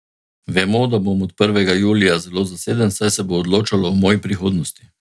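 No technical faults can be heard anywhere in the recording, and the signal stays continuous and steady throughout.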